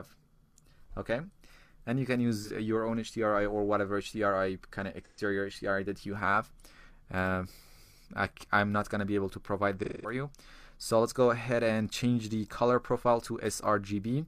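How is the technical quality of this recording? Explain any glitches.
Three glitches come from AAC frame loss with concealment, at 2.39–2.50 s, 5.05–5.20 s and 9.83–10.14 s. Missing stretches of about 43, 128 and 213 ms fit one, three and five lost frames. The decoder rebuilds each gap from the last good spectrum, so the sound turns smeared and phasey, the longest one fading down. A spectrogram shows blurred, frozen-looking patches, and the waveform's envelope sags there.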